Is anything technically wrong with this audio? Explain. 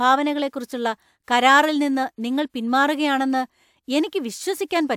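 No, nothing here stands out as a technical problem; the speech comes through steady and intact, with nothing that calls for attention.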